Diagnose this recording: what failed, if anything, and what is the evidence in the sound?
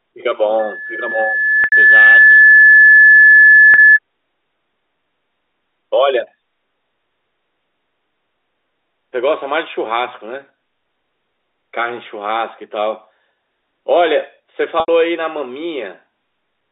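Loudspeaker feedback squeal, 0.59 to 3.99 s, in the acoustic path between loudspeaker and microphone. A tone at 1.7 kHz swells over about a second and a half to roughly 10 dB above the speech. At that frequency the loop gain exceeds one, so the tone keeps reinforcing itself until the loop is broken.

Packet loss with pitch repetition, at 1.64 s (80 ms), 3.74 s (40 ms) and 14.80 s (80 ms), at the network stage. The 40 ms gap is heard as a briefly held, buzzy tone, while the 80 ms gaps fade into silence before the speech returns with a short cross-fade; the durations point to 20 ms packets going missing. The receiver conceals each loss by repeating the last pitch period and fading it down.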